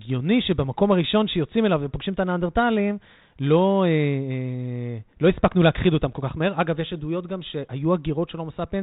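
Nothing stood out on listening to this speech, which comes through G.726 ADPCM at 32 kbit/s.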